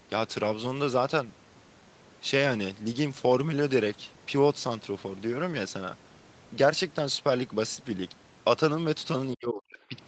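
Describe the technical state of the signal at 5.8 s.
At 5.8 s the speech is intact, with no fault at that moment; it carries the normal sound of call microphone processing, with the lowest bass trimmed and nothing above 8 kHz.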